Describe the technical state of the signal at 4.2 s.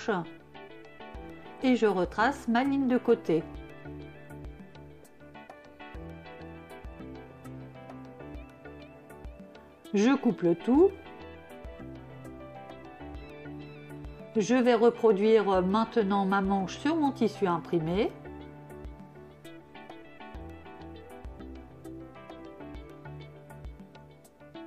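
At 4.2 s the signal is intact, with no audible dropout, distortion, clipping or other fault at that moment.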